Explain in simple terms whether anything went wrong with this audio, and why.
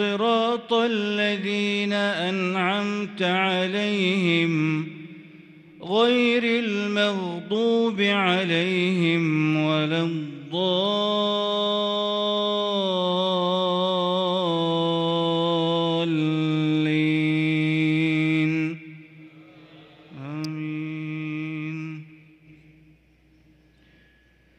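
At 20.44 s, a nearby switch or motor likely sparked into the audio line. This electrical switching spike is heard as a sharp snap or a tight cluster of clicks.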